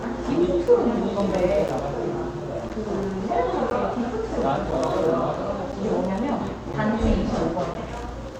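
Gaps between stream segments cut short, hard-edged holes of silence into the sound at 0.67, 1.68, 2.69, 3.70, 4.71, 5.72, 6.73 and 7.74 s. Successive one-second segments don't line up in time, and the player fills each 5 to 13 ms gap with silence while keeping all the audio.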